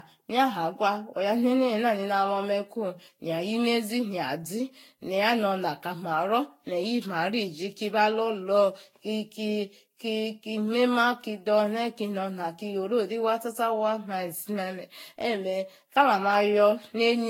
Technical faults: generation loss

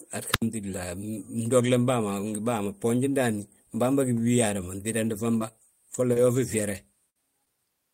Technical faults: wireless microphone squelch dropout; short concealed packet loss; lost packet rebuilt from error correction; burst of packet loss

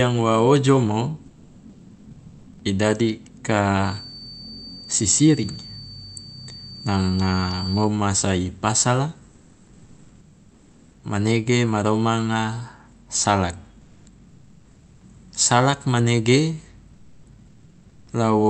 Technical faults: comfort noise in place of the background

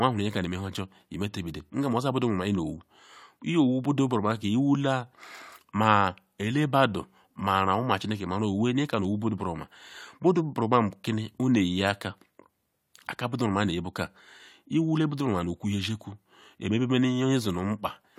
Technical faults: none

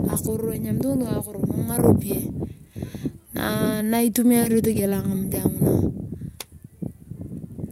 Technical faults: none

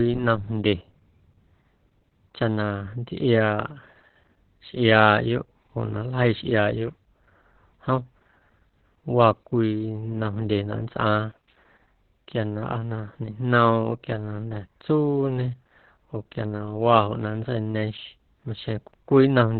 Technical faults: Opus voice compression

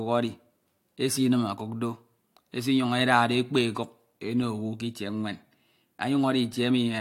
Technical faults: none

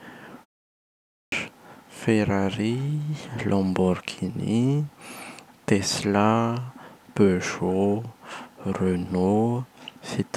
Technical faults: clipped start after a pause

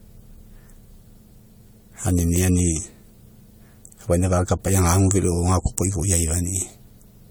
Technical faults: generation loss

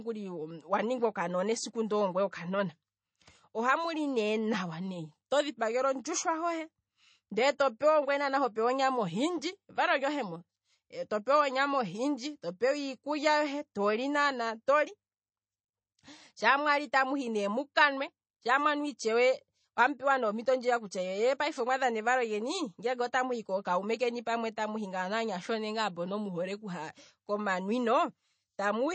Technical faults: MP3 compression

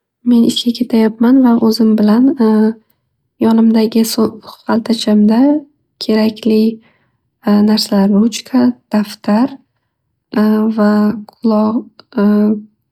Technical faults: none

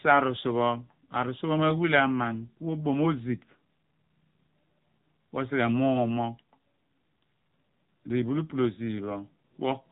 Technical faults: AMR narrowband mobile codec

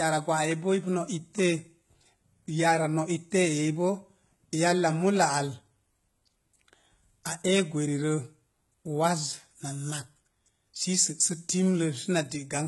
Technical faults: HE-AAC compression

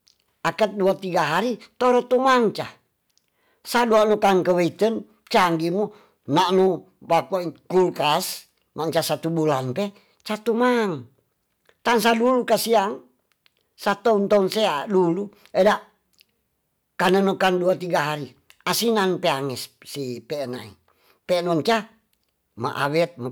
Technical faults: hard clipping

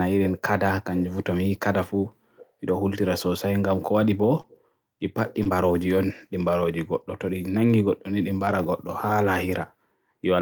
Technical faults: short concealed packet loss; lost packet rebuilt from error correction

